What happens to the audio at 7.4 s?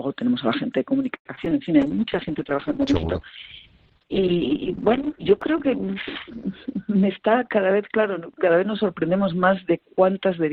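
At 7.4 s two faults overlap. A jitter buffer speed-up runs from 6.95 to 7.59 s: the receiver, holding more audio than it wanted, trimmed short pitch-period slices repeatedly, removing about 50 ms. The sound plays roughly 8% faster at unchanged pitch, which separates it from a clock or resampling error that would raise pitch too.

Underneath, a call bitrate drop has been in effect since 1.82 s. The encoder rate fell from 64 to 8 kbps, so coarser coding leaves a rough, watery texture, and the band is cut from 20 kHz to 6 kHz. The muffling arrives with the grit, unlike a plain low-pass filter, which dulls the sound without adding any roughness.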